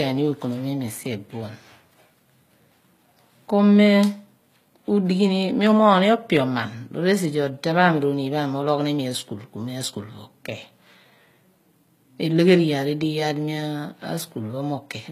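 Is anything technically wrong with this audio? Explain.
Yes. Throughout the speech, s sounds come out gritty and metallic, and nothing is heard above about 14.9 kHz. This is likely HE-AAC compression, consistent with roughly 20 kbps: its treble is rebuilt by copying lower bands upward, so the harmonics above the crossover don't match.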